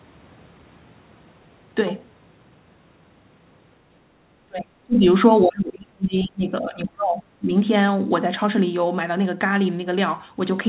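Speech suppressed in double talk at 4.47–5.06 s, 5.44–7.23 s and 7.39–7.51 s: the talker's level plunges, by roughly 35 dB at worst, in chunks, likely because an echo canceller mistook overlapping far-end talk for echo and attenuated both.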